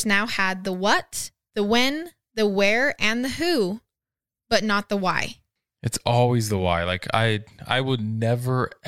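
No technical faults can be heard anywhere in the recording.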